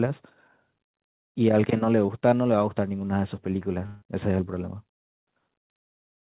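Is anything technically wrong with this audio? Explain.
Yes, there are two faults in this speech.

From 2.06 to 2.10 s there is a short concealed packet loss. About 20 ms of audio failed to arrive, and the receiver extended the preceding sound to cover the gap before blending back. It is heard as a tiny smear or wobble. It is too brief to fade away, which separates it from a dropout.

From 3.86 to 4.04 s the sound turns into a buzzy or hissy continuation of itself that fades over roughly 0.16 s, then normal audio resumes with that stretch missing. The likely cause is a long network dropout. It lasts far longer than the earlier loss and audibly decays, but no true silence follows within this gap.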